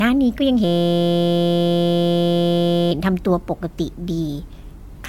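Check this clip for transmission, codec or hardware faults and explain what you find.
Two faults are present: codec damage across the whole recording and a hardware buffer loop early in the recording.

Generation loss runs throughout the speech. The audio sounds swirly and hollow, with smeared consonant attacks, and nothing remains above about 17.5 kHz. This is likely the result of repeated lossy coding, around four passes, consistent with AAC-LC at roughly 96 kbit/s. Each decode-and-re-encode quantises the signal on a shifted frame grid, so noise and spectral gaps accumulate beyond what a single encode at that rate would produce.

A system hang loop occupies 0.64 s to 2.91 s. A 5.8 ms slice of audio repeats exactly, which fits a 256-sample buffer. The driver or host stalled while the output hardware kept replaying the same ring-buffer segment. Because the segment is so short, the repetition fuses into a steady buzz at 172 Hz for over two seconds instead of a stutter.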